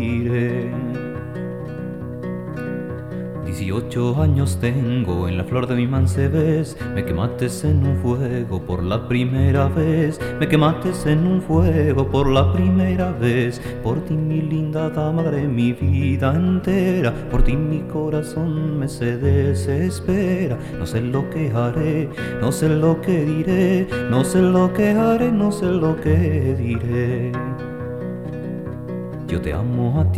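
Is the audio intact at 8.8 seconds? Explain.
Yes, the audio is intact at 8.8 seconds, with no dropout, click, distortion or other fault at that point.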